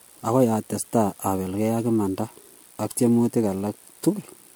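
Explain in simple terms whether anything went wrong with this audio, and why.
Something did go wrong, and it lasts from start to finish. The speech sounds swirly and smeared, with a hollow, watery edge. The starts of sounds are soft and blurred instead of crisp. This is generation loss. The likely cause is that the recording was squeezed into the MP3 format and unpacked again around five times. Each round throws away a little more detail in slightly different places. Those small losses pile up.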